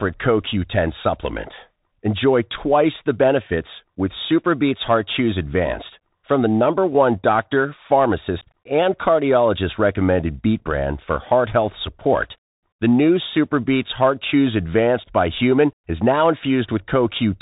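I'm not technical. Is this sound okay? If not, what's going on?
No. The Bluetooth CVSD headset codec runs through the whole clip. It's the basic phone-call link between a wireless headset and a phone, and it sends the speech as a rapid stream of tiny up-or-down steps. Nothing above about 4 kHz gets through, so the speech sounds narrow and boxy. The steps can't keep up with sharp, bright sounds, so s sounds turn scratchy, and a fine grainy hiss sits underneath.

Unconcealed Bluetooth headset packet loss happens at 8.41 s and at 11.70 s. The speech travels in very short chunks, and some never arrived. Nothing filled the gaps, so the sound simply drops out. At 8.41 s the hole is about 15 ms, which sounds like a few chunks lost together. At 11.70 s it is under 4 ms, likely a single chunk. Each gap has abrupt edges that can give a click.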